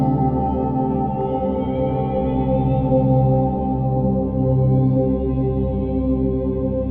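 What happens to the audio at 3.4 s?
Nothing goes wrong at 3.4 s: the audio plays through that moment cleanly, with no dropout, click, distortion or other fault.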